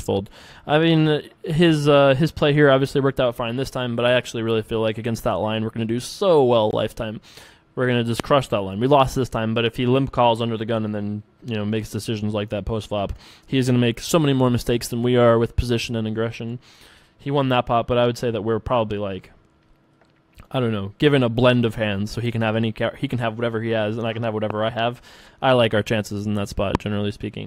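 The audio has three loud pops, single sharp pulses at 8.20–8.22 s, 24.50–24.53 s and 26.75–26.77 s. The first and last stand roughly 20 dB above the surrounding level and the middle one about 10 dB. Each is a brief thump laid over the sound, which carries on underneath without a break. That sets them apart from dropouts or edit clicks, where the sound itself is cut. A likely cause is a voltage spike from a plug, switch, static or driver glitch.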